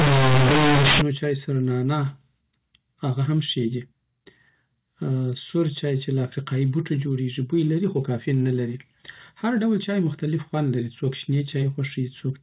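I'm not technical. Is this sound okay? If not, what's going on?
No. From the start until about 1.02 s, just before "سره نعناع", there's harsh, very loud buzzing. This is companded audio read as linear: telephone-coded A-law sound is played without being unpacked. Unlike ordinary clipping, even the quiet gaps roar with noise. The telephone coding itself decodes correctly after that.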